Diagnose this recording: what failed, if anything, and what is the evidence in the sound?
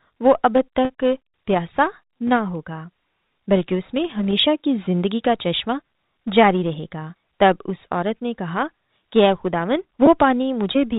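Network packet loss with pitch repetition: gaps at 0.85–0.90 s (50 ms), 2.76 s and 10.06 s (10 ms) are filled with one repeated pitch period, showing as frozen harmonic stripes.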